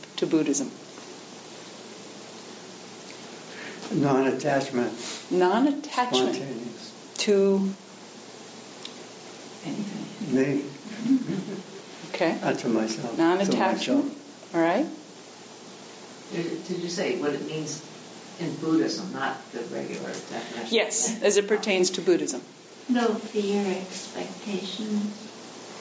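No technical faults are audible anywhere in the audio; the signal stays continuous and intact throughout, with no interruptions or defects in its reproduction.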